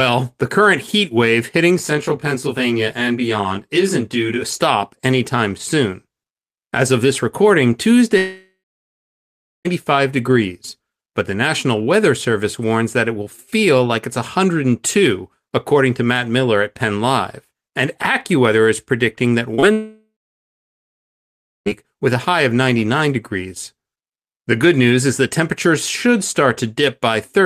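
A speech recording in which, from 1.79 to 4.43 s, one channel runs about 20 ms behind the other before the two are summed, so channel delay (comb filtering) cuts evenly spaced notches from around 30 Hz upward and leaves the voice rough and slightly doubled. Packets that arrived too late were patched over as short concealed packet loss at 19.55 to 19.60 s and 19.60 to 19.64 s, giving a brief smear just before a longer break. Two gaps, likely a long network dropout each time, run from 8.17 to 9.67 s and from 19.72 to 21.68 s. In each, the last sound is stretched into a fading buzz or hiss, followed by about 1.1 s and then about 1.6 s of silence, and the speech resumes with that stretch missing.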